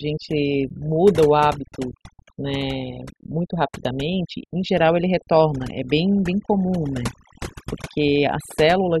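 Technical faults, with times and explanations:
Throughout: overdone noise removal. The noise reduction was pushed far too hard, so each frequency band that sits close to the tool's noise estimate is pulled down to almost nothing, taking the softer parts of the speech with it. Between phrases the background drops to near silence scattered with twinkling specks. On a spectrogram the gaps show as dark, empty areas dotted with isolated bright flecks, and the speech harmonics look ragged and full of holes.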